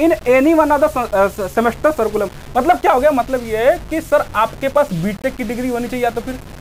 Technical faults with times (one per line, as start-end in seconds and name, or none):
0.00-6.61 low bit depth without dither